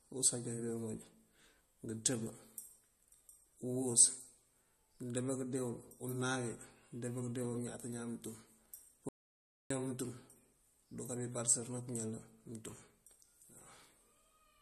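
Speech with a watery, swirling texture throughout, hissing s sounds that chirp metallically, and nothing above 13.1 kHz. This is likely MP3 compression at a bitrate low enough to be plainly audible, which fits roughly 40 kbps: the encoder has cut the treble and is switching weak frequency content on and off between frames. From 9.09 to 9.70 s the sound cuts to silence with no room tone for about 0.62 s. This is an audio dropout to silence, and the likely cause is a lost input while the recorder kept writing silence, so that stretch of speech is gone.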